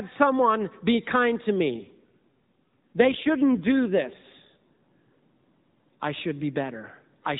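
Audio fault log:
1.74 to 4.88 s, AMR rate drop: just after "someone be kind to", the speech turns rougher, buzzier and more synthetic, then recovers when the rate climbs back. The sound fits the AMR-NB mobile codec falling from about 12.2 kbps, where its damage is light, to around 5.9 kbps, leaving fewer pulses per subframe to model the voice. Unlike packet loss, nothing goes silent or repeats, and unlike a bandwidth cut, the band stays the same.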